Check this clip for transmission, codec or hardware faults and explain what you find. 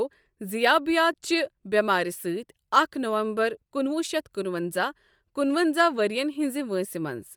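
One fault is present, and it runs through the whole speech clip. It sounds like Bluetooth LC3 compression is the likely cause. The codec splits sound into short frames and quantises each frame's spectrum coarsely. The damage is plainly audible as a breathy, grainy edge. This fits 48 kbps with 10 ms frames. Nothing is heard above 20.2 kHz.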